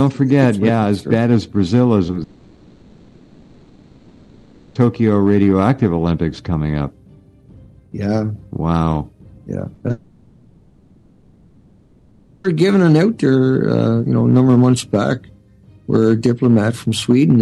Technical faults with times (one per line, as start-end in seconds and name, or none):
2.07-2.16 short concealed packet loss
2.23-4.76 long network dropout
9.74-9.90 repeated packet loss (robotic sound)
9.91-12.45 long network dropout